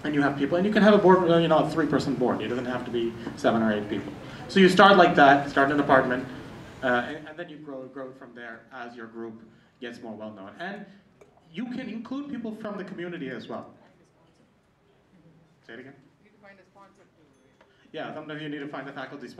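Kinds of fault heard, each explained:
No technical faults can be heard in this audio, and its level is smoothly turned down or back up at times, as with a fader.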